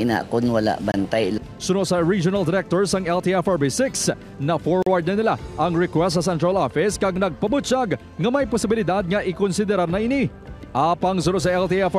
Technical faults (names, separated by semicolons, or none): block of digital silence